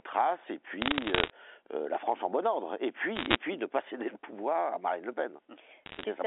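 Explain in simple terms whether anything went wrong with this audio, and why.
Bit errors on a digital phone line cause crackly bursts at 0.82–1.30 s, 3.16–3.38 s and 5.86–6.04 s. Roughly one bit in a hundred was flipped in the first and last bursts, and a little fewer in the middle one. Each flipped bit spoils one sample, and a hit on one of the most important bits gives a sharp tick over the otherwise unchanged speech.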